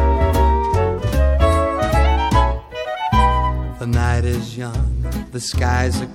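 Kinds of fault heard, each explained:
No technical faults can be heard anywhere in this audio.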